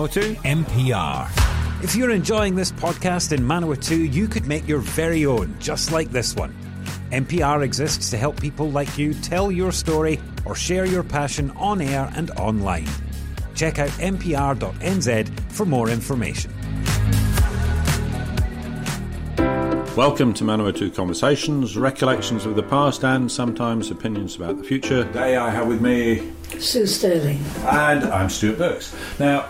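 No technical faults can be heard anywhere in this audio. Nothing in the sound points to a break, a gap or damage at any point along its course.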